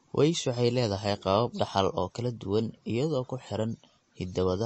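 Heavy MP3 compression, likely at a low bitrate, runs through the whole speech clip. Short of bits, the encoder removes everything above 8.3 kHz and drops weak detail frame by frame, so the speech sounds dull, watery and swirly, with smeared consonants.

From 0.19 s to 3.87 s there are clock slip clicks. Two devices running on unmatched clocks, likely drifting apart by a few tens of parts per million, lose or repeat a sample about once a second. This produces about five faint, evenly spaced ticks.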